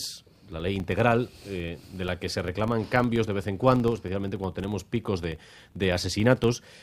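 Throughout, a filter restarted on every block resets its state at each boundary, leaving a 25 Hz buzz of small transients that track the signal's level.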